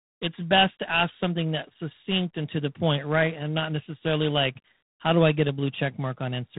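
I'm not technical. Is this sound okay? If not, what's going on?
No. The whole clip, from start to finish, has been squeezed through a telephone-style codec called G.726 ADPCM. This system saves space by sending only rough guesses of how the sound changes. Here it is squeezed hard, so those guesses are coarse. That leaves a harsh, rasping hiss riding on the speech that grows louder when the speech does. Nothing above about 3.9 kHz survives, so the sound is also dull and boxy.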